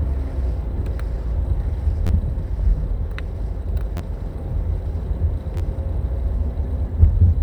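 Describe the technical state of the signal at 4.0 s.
At 4.0 s a repeated buffer occurs, spanning about 3.97 to 4.01 s. New audio arrived late, so the same roughly 11.6 ms block, which fits a 512-sample buffer, was replayed three extra times. Each repeat ends in a hard join, so it sounds like a brief buzz rather than a stutter, and essentially nothing is lost. The waveform shows four identical segments with a step at each seam. A spectrogram shows thin vertical lines at the joins and harmonic banding near 86 Hz spacing.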